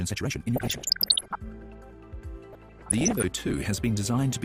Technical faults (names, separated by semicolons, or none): time-stretched section; DAB burbling